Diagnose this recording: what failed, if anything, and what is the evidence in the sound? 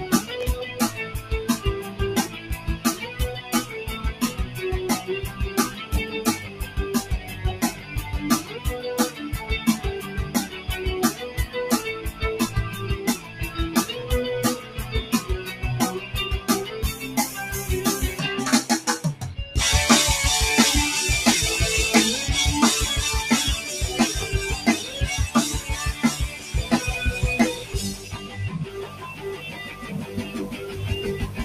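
Call processing: a speech-tuned noise suppressor runs on this sound throughout. It treats steady material as noise, so levels pump by around 10 dB.

Loud pops at 0.41–0.44 s and 24.21–24.25 s, each a single sharp hit about 10 dB above the sound, likely a voltage step in the analogue wiring.

Sound cut by the noise suppressor at 1.07–12.22, 13.17–13.58, 14.6–17.02, 25.61–26.54 and 27.57–31.38 s. Held parts and tails sink by up to about 8 dB.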